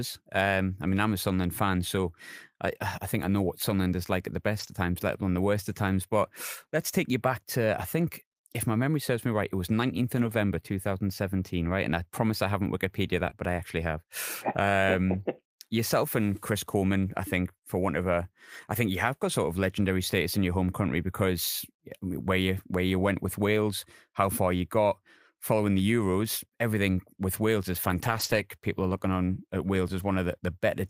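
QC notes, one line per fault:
4.59 to 4.73 s, 10.17 to 10.31 s, 13.25 to 13.27 s, 27.83 to 28.41 s and 28.89 to 28.91 s, lost packet rebuilt from error correction: packets went missing but the following packets carried low-bitrate copies that the decoder played instead, so there is no gap. Those stretches of speech turn rougher and noisier.
13.29 to 13.33 s, short concealed packet loss: about 20 ms never arrived in time, so the receiver extended the preceding sound and blended back into the real signal. This comes out as a brief smear or wobble right after the rebuilt frame at 13.25 s.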